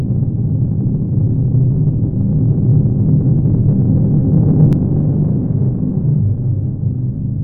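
A recording of everyday sounds that develops a channel delay (doubling) fault from 4.73 s to the end. One channel arrives 40 ms late and is summed to mono with the other, so each event is heard twice at equal strength, like a tight slap echo. On the waveform every transient gains an equal-height twin 40 ms behind it. The spectrogram shows each onset stacked with a duplicate and fine comb-like notches spaced 25 Hz apart.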